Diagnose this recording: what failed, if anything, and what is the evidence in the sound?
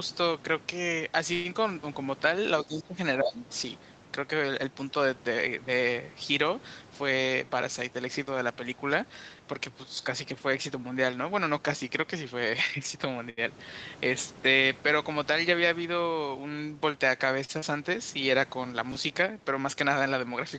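At the network and jitter-buffer stage, packets were likely held up long enough for the buffer to run dry. From 1.33 to 1.47 s the receiver extends the last sound as a fading buzz for about 115 ms. Speech then resumes where it stopped, with nothing lost.

In call processing, the echo canceller was probably confused by both sides talking and turned the near talker down. The speech dips by about 20 dB from 2.66 to 2.97 s, and by about 15 dB from 3.19 to 3.43 s and from 9.84 to 9.97 s. It sounds thinned or briefly chopped.

The jitter buffer ran a speed-up. Holding more audio than its target, it trimmed short pitch-period slices repeatedly from 6.96 to 8.21 s, removing roughly a tenth of a second. That stretch plays at about 109% speed at unchanged pitch and sounds hurried.

At the jitter buffer there are two short stalls from a late packet. Each time a packet missed its slot, the receiver held the last sound until it arrived: 78 ms at 13.30 s and 40 ms at 17.45 s. 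Each is heard as a drawn-out sound with a faint buzz or dip.

Over the network, a short concealed packet loss occurs at 17.59 to 17.64 s, where about 40 ms never reached the decoder. The receiver patched the hole with roughly 33 ms of extrapolated sound before blending back, leaving a brief smear just after the second stall.

At the buffer or write stage, chunks came out of order. Around 18.92 to 18.96 s a piece of audio plays after material that should follow it, which fits a 10 ms chunk arriving roughly 30 ms late. Nothing is missing, but hard joins give a jumbled instant.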